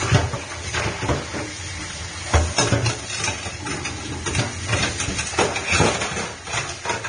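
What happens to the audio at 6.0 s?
At 6.0 s the audio, like the rest of the clip, has the hissy, grainy treble and blurred attacks of likely Vorbis compression at a low bitrate near 25 kbps. A spectrogram shows nothing above 9.7 kHz and smeared, noisy upper bands.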